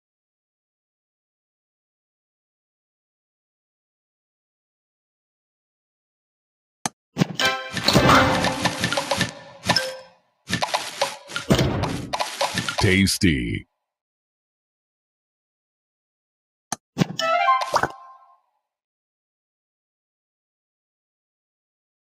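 From 10.07 to 10.48 s, the sound is cut by the noise suppressor. The suppressor misjudged part of the wanted signal as background noise and pulled it down harder than everything around it. The level dips by as much as about 19 dB at its deepest. The affected stretch lasts roughly four tenths of a second. To the ear, the sound briefly sinks, as if pushed away, then returns to its normal level.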